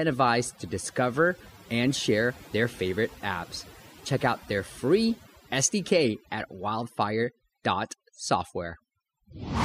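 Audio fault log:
throughout, overdone noise removal: aggressive denoising gates bands near the noise estimate, leaving near-silent gaps with twinkling specks, unlike plain low-pass dullness.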